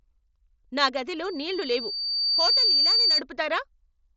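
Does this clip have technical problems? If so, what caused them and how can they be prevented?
Yes. A loudspeaker feedback squeal runs from 1.23 s to 3.22 s in this speech clip: a single tone near 4.6 kHz swells over roughly one and a half seconds until it sits a few decibels above the speech. The microphone is picking up the loudspeaker it feeds, and at that frequency the loop gain exceeds one, so the tone keeps reinforcing itself. The mSBC headset path's band limit near 7.7 kHz leaves it fully audible. Keeping the microphone out of the loudspeaker's coverage and lowering gain or notching around 4.6 kHz would prevent it.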